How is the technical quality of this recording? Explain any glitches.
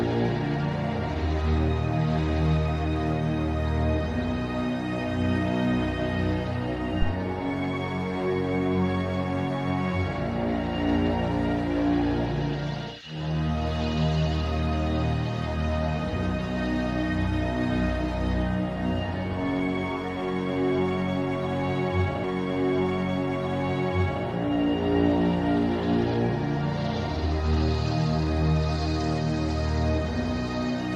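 The recording has one glitch, a phantom power thump between 7.02 and 7.15 s. A supply voltage was switched on or off on a live input, and that sudden DC step passed through the coupling capacitors as a single low, dull thud that fades in about 30 ms. On a waveform it appears as a one-sided excursion that settles back toward zero; on a spectrogram, a short dark burst concentrated at the bottom frequencies, with little energy higher up.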